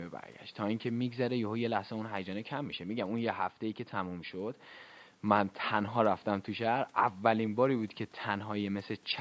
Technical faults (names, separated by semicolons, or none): none